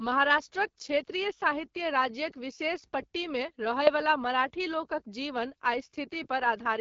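From start to end, the speech carries the sound of the AMR wideband (HD Voice) codec at a low rate. The damage is plainly audible: voices come across rough and raspy, which points to about 8.85 kbit/s, one of the two lowest rates. The codec models speech with pulses driving a vocal tract filter only up to 6.4 kHz. A spectrogram shows detailed structure below 6.4 kHz, a smeared noise-like band from there to 7 kHz, and nothing above.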